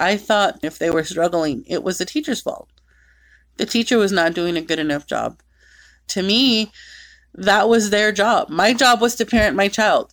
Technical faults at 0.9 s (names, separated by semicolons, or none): damaged data in a compressed stream